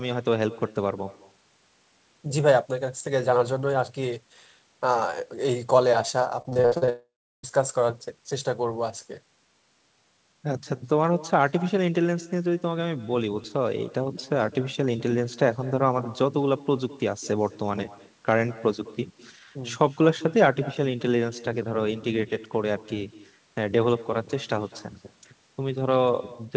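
A faint, thinner copy of the speech trails every phrase from start to finish, arriving roughly a fifth of a second late at about 21 dB below the talker. That is echo with no canceller: the far end's loudspeaker fed back into its microphone and nothing removed it.

From 6.42 to 6.89 s the sound turns choppy, with a run of brief holes, the longest about 55 ms, patched over for nearly half of that stretch. This is repeated packet loss giving the robotic sound, each gap filled by stretching the last fragment before the next one hits.

Straight after, from 6.89 to 7.45 s, the audio smears into a fading buzz and then drops to silence for about 0.36 s before speech resumes with a piece missing. A long network dropout is the likely cause, with the receiver extending the last sound until it gave out.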